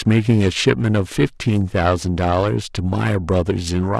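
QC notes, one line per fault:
Throughout, periodic clock jitter: interference is modulating the converter's sample clock at around 500 Hz, so every component of the speech gains sidebands roughly 500 Hz either side, strongest on high-frequency content. The result is a rough, metallic edge that disappears in the pauses.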